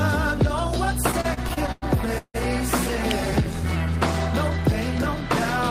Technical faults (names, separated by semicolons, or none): repeated stalls (stutter); electrical switching spike